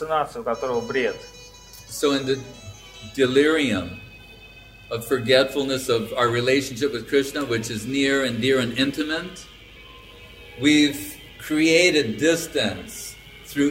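No technical faults can be heard anywhere in this recording. The sound holds steady throughout, with nothing out of place at any moment.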